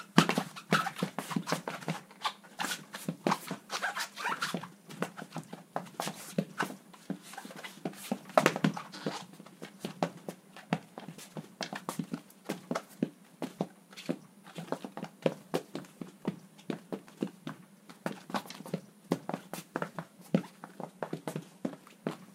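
A drift correction step runs from 20.82 to 21.82 s. For that second the sound slows by 5.55% and drops nearly a semitone (-98.9 cents), then snaps back to normal pitch. Clock-matching software likely changed the playback rate in a single step to rebalance its buffer.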